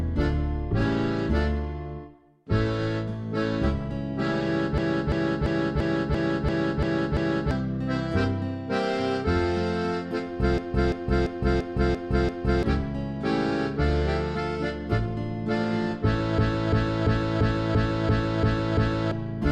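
A machine-gun stutter, one 341 ms slice repeating about three times a second, runs from 4.78 to 7.51 s (8 repeats), 10.58 to 12.63 s (6) and 16.38 to 19.12 s (8). This system hang loop, which fits a 16384-sample buffer, costs around two to three seconds of audio each time.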